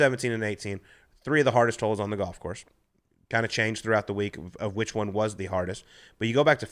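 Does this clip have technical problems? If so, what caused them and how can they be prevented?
No, no technical problems can be heard in this speech clip. With nothing at fault, there is no cause to trace and nothing that needs preventing.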